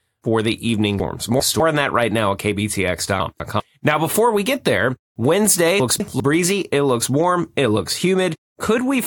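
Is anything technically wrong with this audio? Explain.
Yes, there are chunks out of order at 1.0 to 1.6 s, 3.2 to 3.6 s and 5.8 to 6.2 s. A 200 ms piece of speech turns up late, two chunks late in the first case and one in the others, so a short jumbled stretch plays with hard joins.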